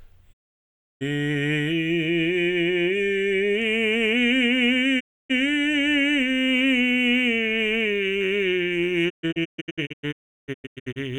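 Digital broadcast dropout breaks up this music clip at 0.32–1.03 s, 4.99–5.32 s, and again from 9.08 to 10.98 s, where the sound drops out in several short holes totalling about 1.2 s, the longest 0.35 s. Each time the receiver stopped getting good frames and muted with a quick 20 ms fade, returning only once clean data arrived. The music broadcast during those gaps is simply missing.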